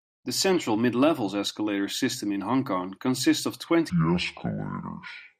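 Probably a playback or editing clock mismatch: a section at the wrong speed runs from 3.9 s to the end at 5.39 s, right after "consists of", slowed to 0.59 times normal speed, so the speech drops by roughly ten semitones and drags, turning deep and sluggish.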